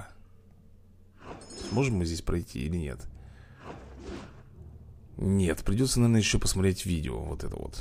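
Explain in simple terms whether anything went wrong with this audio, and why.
Nothing stood out as having gone wrong when listening to this recording.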